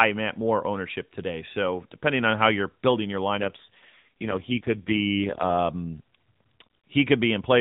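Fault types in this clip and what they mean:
AMR rate drop: from 3.36 to 5.59 s, just after "how you're building your", the narrowband mobile codec falls back to a leaner mode. The sound turns rougher and more synthetic, which fits a switch from 12.2 to 4.75 kbps, with no gap or band change before it recovers.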